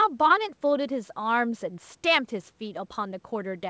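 Listening to this speech clip, nothing stood out as a technical problem.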